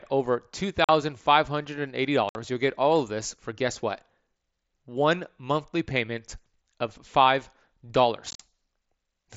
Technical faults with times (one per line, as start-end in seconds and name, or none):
0.84-0.89 unconcealed Bluetooth headset packet loss
2.29-2.35 unconcealed Bluetooth headset packet loss
8.31-8.40 unconcealed Bluetooth headset packet loss